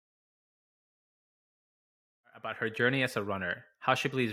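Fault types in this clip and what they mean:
Nothing stood out on listening to this speech; the gentle fade-in that finishes around 2.9 s sounds like an ordinary edit.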